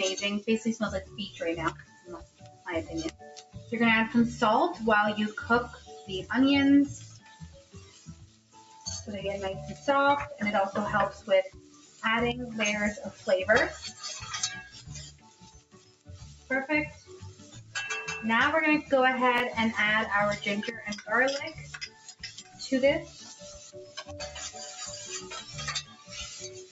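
Throughout the clip, held and fading material keeps sinking while attacks punch through, so the level pumps and tails thin out, with swings of about 15 dB. That is a noise suppressor applied to music or sounds: a speech-tuned suppressor was left running and treats steady tones, ambience and decay as noise to be pulled down. The sound comes through a call microphone path, which also limits it to nothing above 8 kHz.

The deepest dips, where sound is cut by the noise suppressor, fall at 1.05 to 3.72 s (about 14 dB down), 5.75 to 5.9 s (about 7 dB), 7.01 to 8.86 s (about 15 dB), 11.14 to 12.03 s (about 12 dB), 13.11 to 13.27 s (about 10 dB), 14.68 to 17.75 s (about 15 dB), 21.6 to 24.02 s (about 14 dB) and 25.42 s to the end (about 11 dB). In each, sustained or decaying parts drop away or get their tails chopped short while sharp onsets survive, because the suppressor mistook that material for background noise.

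At 19.38 to 19.4 s a tiny stutter with a hard click-like join appears. This is a repeated buffer: fresh audio arrived late, so the last block was played once more. The 20 ms repeat fits a 20 ms buffer and costs about that much audio.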